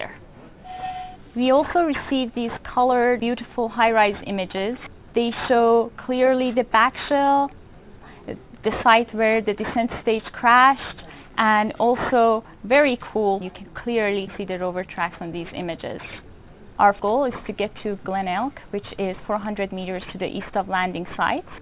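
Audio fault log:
Throughout: aliasing. Content above 4 kHz folds back as gritty false tones roughly 20 dB down, fitting unfiltered resampling to 8 kHz; spectrogram shows mirrored streaks crowding the 4 kHz edge.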